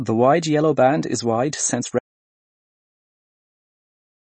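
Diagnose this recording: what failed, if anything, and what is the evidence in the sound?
The codec stage shows damage throughout. Nothing sits above 8.3 kHz, and the speech sounds watery, with plainly audible swirling on sibilants and smeared attacks. This is likely MP3 compression at a low bitrate, around 32 kbps. The starved encoder cut the treble and dropped weak spectral lines frame by frame.

An audio dropout to silence follows, probably at the input or link stage. Just after "band is wide since", at 1.99 s, the sound stops dead. Silence with no room tone continues to the end. The likely cause is a lost or muted input, with the recorder writing silence.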